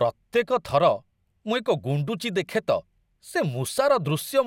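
Nothing technically wrong can be heard in this short speech recording: the signal holds steady throughout, with no audible defect anywhere in it.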